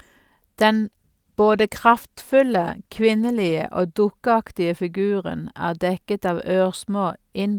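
Speech clip with a call bitrate drop from 0.84 s to 3.61 s, ending just before "og dukkeaktige". The sound turns coarse and watery, with the upper frequencies thinned out, which fits the encoder falling from about 64 kbps to about 20 kbps after the call's bandwidth estimate dropped. With fewer bits, the codec quantises more crudely and trims high-frequency content. The degraded stretch lasts about 2.7 s before full quality returns.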